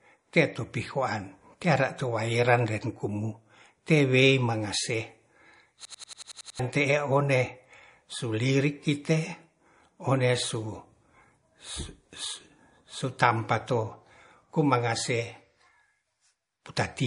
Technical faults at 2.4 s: MP3 compression

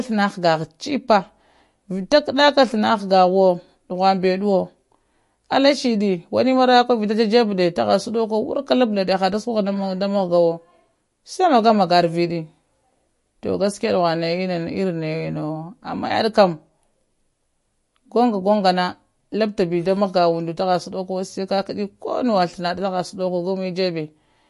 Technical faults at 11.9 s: MP3 compression

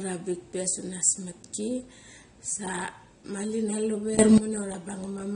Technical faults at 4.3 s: AAC compression; sudden gain jump

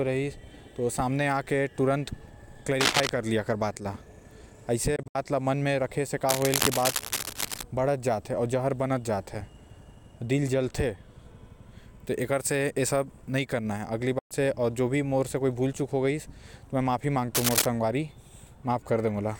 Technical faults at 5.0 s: Bluetooth dropout

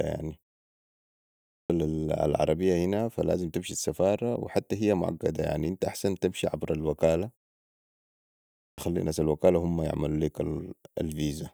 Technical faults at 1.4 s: clipped start after a pause

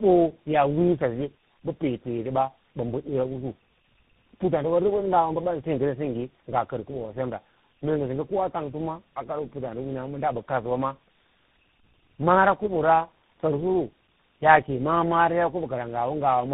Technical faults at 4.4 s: tandem speech coding

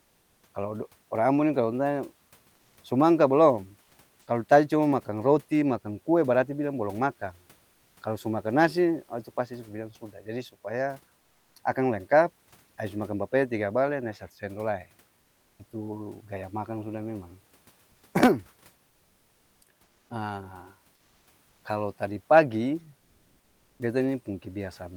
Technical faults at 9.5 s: none

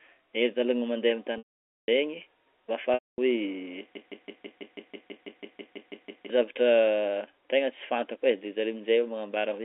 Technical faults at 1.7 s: packet loss with pitch repetition

